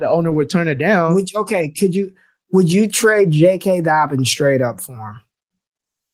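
No technical faults are audible in this speech.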